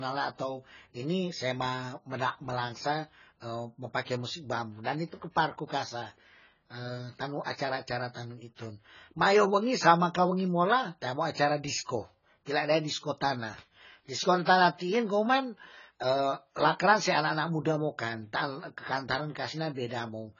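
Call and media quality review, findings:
Speech dull, smeared throughout, nothing above 7 kHz, fizzy sibilants. Likely AAC compression, heavy, fitting AAC-LC near 16 kbps: coarse quantisation, lowered cut-off.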